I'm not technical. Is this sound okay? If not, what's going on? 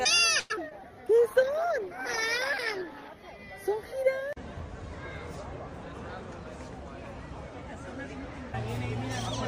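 No. At 0.39 s, the call audio froze, likely because data got held up on the network. The last sound stretched into a fading buzz or hiss for about a tenth of a second, then carried on.

Short concealed packet loss struck twice, at 0.56 to 0.59 s and 0.69 to 0.80 s. Small pieces arrived too late, and the patched-over gaps sound like brief smears or wobbles.

From 1.06 to 3.18 s, a call bitrate drop meant the connection looked weaker, so the sound was squeezed into far less data and turns rough and muffled.

From 5.86 to 6.46 s, a jitter buffer speed-up trimmed about a tenth of a second of backed-up audio, so the sound plays about 15% faster at unchanged pitch, hurried.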